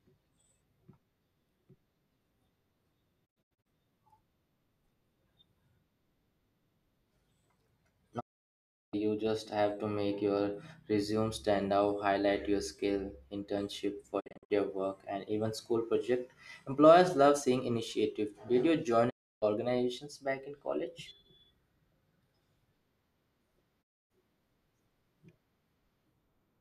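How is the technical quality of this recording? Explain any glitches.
The recording is marred by five digital broadcast dropouts, where the receiver lost valid frames and muted, leaving gaps in the speech.

At 3.25 to 3.67 s, lost frames forced the receiver to mute repeatedly, so the sound breaks into several short holes spread over about 0.38 s, the longest about 72 ms, each with a quick 20 ms fade.

At 8.19 to 8.95 s, a continuous run of frames was lost, and the receiver silenced the audio for a single 0.72 s gap, fading out and back in over 20 ms.

At 14.19 to 14.52 s, scattered bad frames again produced a cluster of short mutes across about 0.29 s, none longer than about 48 ms.

At 19.09 to 19.44 s, the receiver muted through one continuous loss, giving a clean 0.31 s hole.

At 23.81 to 24.12 s, a final dropout silenced the audio for 0.26 s, with the same brief fades at each edge.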